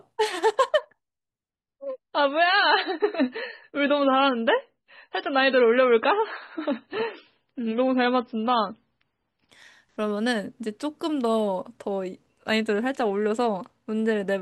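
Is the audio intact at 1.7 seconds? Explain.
No. From 1.50 s to 9.50 s an adaptive stream dropped to a lower bitrate after the connection slowed. Treble vanishes above 5.5 kHz, and the speech turns swirly with codec artefacts with no gap, which fits a sudden switch from 128 to 16 kbit/s MP3.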